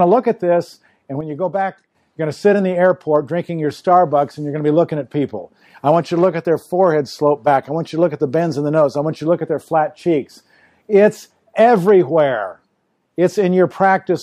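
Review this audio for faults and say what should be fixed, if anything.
There's a sudden gain jump at 1.21 s. The level drops by about 6 dB in one step and stays down until 1.95 s, where it jumps straight back up. The background noise drops and returns right along with the sound, so this isn't something in the source. It's a digital gain change applied instantly, sample to sample, likely from a setting being switched or a bit shift with no ramp behind it. To prevent it, smooth any gain change over a short ramp of a few milliseconds rather than applying it in a single step.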